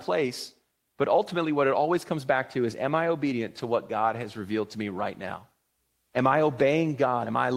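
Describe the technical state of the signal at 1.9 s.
At 1.9 s the signal is intact, with no audible technical fault at that moment.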